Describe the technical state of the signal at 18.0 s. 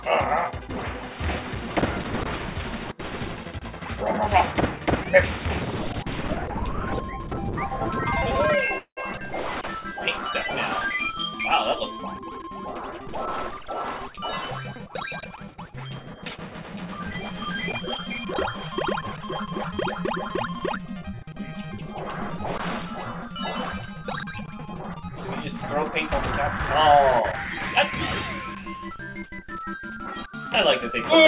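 At 17.96 to 18.00 s there is a short stall from a late packet. A packet arrived late and the jitter buffer ran dry. The receiver stretched the last sound by 19 ms, then resumed from the same point. Nothing is lost, but the sound holds briefly with a slight buzz or dip. The G.711 band limit at 4 kHz applies throughout.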